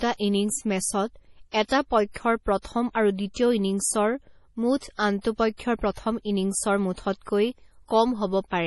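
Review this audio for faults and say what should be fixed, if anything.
MP3 compression, throughout: the speech is cut off above 11.5 kHz and sounds watery and swirly, with weak frequency detail flickering between frames. This is likely a low-bitrate MP3 encode, around 32 kbps, where too few bits force the encoder to drop treble and quiet components. Prevent it by encoding at a higher bitrate or keeping a lossless master.

Pre-echo at 1.68–1.71 s, 2.12–2.16 s (just before "প্ৰথম আৰু"), 3.34–3.36 s (just after "প্ৰথম আৰু"), 4.98 s, and 5.21–5.25 s (just before "পক্ষৰ প্ৰথম ইনিংছৰ মুঠতকৈ"): a short hiss of 12 to 42 ms precedes each attack. The codec spreads noise sized for the loud onset across its whole block, so it fills the quiet moment beforehand. Prevent it with a higher bitrate or an encoder that switches to short blocks on transients.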